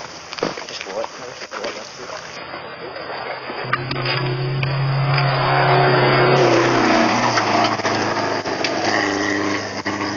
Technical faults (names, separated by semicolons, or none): adaptive stream at a lower bitrate